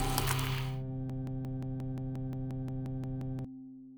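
Something in the playback or streaming chain has likely stalled from 1.10 s to 3.45 s, resending the last fragment it held instead of fresh data. The result is a broken-record loop: a chunk of the audio about 176 ms long plays back to back, identical each time, thirteen times over, giving a rapid stuttering pulse at roughly five to six repeats per second. Whatever should have sounded during those 2.3 seconds never arrives and is lost.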